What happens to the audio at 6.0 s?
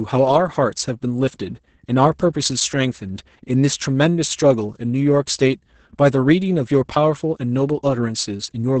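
At 6.0 s the speech sounds muffled, hoarse and faintly robotic, with nothing above 8.8 kHz. This is Opus voice compression, present throughout, and the heavy damage fits SILK at about 10 kbps.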